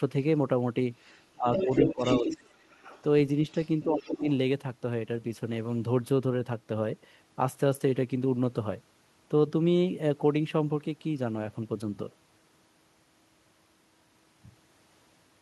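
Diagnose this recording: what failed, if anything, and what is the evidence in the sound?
A second voice bleeds in at 1.08–1.21, 1.53–2.38, 2.71–3.02 and 3.5–4.21 s, from faint to full level. This is the other side's voice leaking through, likely uncancelled echo in call processing.

The talker dips by as much as about 25 dB within 1.35–2.58 s and 3.84–4.26 s. This is speech suppressed in double talk, likely from the echo canceller ducking both voices.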